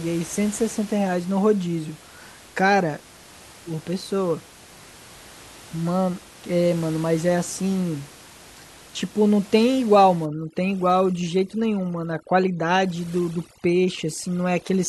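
From 10.26 s to the end at 14.88 s, overdone noise removal takes hold. The noise reduction is pushed so hard that individual frequency bands near its noise estimate are gated almost to nothing, and the room noise, sitting about 22 dB below the speech before this point, drops to near silence sprinkled with twinkling specks. The speech loses its quieter detail as it is removed along with the noise. On a spectrogram the background becomes dark with scattered isolated dots, and the speech harmonics look patchy and full of holes.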